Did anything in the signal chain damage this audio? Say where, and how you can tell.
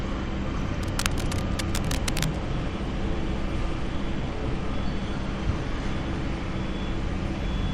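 Yes, in the analogue wiring. From 0.83 to 2.37 s, uneven scratching sits about 10 dB below the sound. Cable scratch noise, likely from a worn connector.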